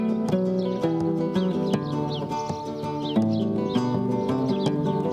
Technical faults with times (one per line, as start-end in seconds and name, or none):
none